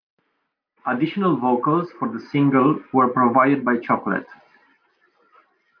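Speech, with no audible faults.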